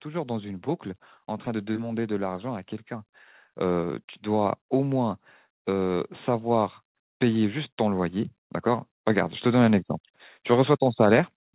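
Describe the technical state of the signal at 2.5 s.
At 2.5 s you're in the late part of an automatic gain rising stretch that runs from about 1.46 to 2.73 s. The gain control decided the input was too quiet and eased its gain up by about 3 dB, so the speech and the background noise swell together rather than the talker alone getting louder. Underneath, the call path is band-limited with nothing above 4 kHz, which fits a narrowband phone codec like G.711.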